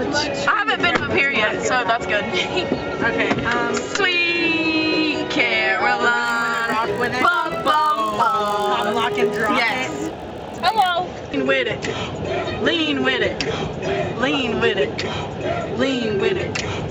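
Resampler restarted on every block, from 6.24 to 10.9 s: each 20 ms block was converted in isolation, which fits an upsampling from 16 kHz to 48 kHz, so every block edge carries a small error. The result is a 50 Hz buzz that sounds only while signal is present.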